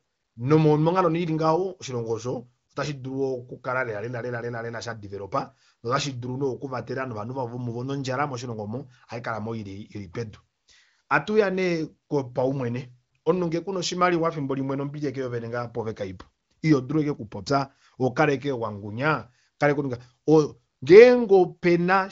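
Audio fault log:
No faults found: the speech comes through AMR wideband (HD Voice) coding at a rate that points to about 23 kbit/s, with no content above roughly 7.5 kHz and codec damage faint at most.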